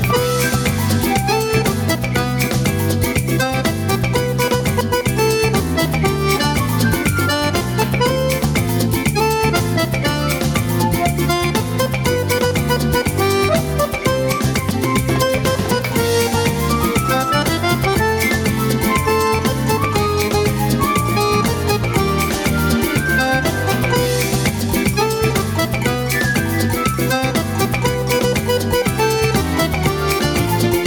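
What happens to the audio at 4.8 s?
At 4.81 s there is a skip: audio missing between chunks. Roughly a tenth of a second of material is gone, and the sound on either side is butted together with no silence, so it lurches forward abruptly. This is most likely a recorder or processor that handles audio in blocks, which fits chunks of about 10 s, and drops a short piece while closing one block and opening the next.

Across this moment, as throughout the clip, gain pumping is also present, with the level moving by about 10 dB. Loud and quiet passages sit closer together than they should, giving a squashed quality. The likely cause is an input gain set far too high, with a fast limiter or compressor repeatedly pulling it back on every loud event.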